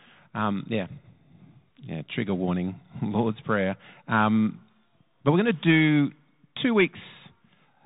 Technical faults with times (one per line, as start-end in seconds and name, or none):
0.00-7.85 Bluetooth CVSD headset codec